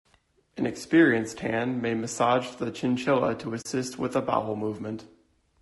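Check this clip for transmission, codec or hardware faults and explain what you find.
Two faults are present: codec damage across the whole clip and one brief dropout.

Throughout, the speech sounds rough and grainy, with noise between harmonics and a thin top band, likely from low-delay AAC compression (AAC-ELD) whose short frames starve pitch detail at a rate that fits about 32 kbps.

From 3.61 to 3.66 s, between "massage the chinchilla to" and "with a bowel", AAC frame loss with muting occurs: the decoder zeroed the missing spectra, fitting two lost frames, so sound fades into a soft-edged hole.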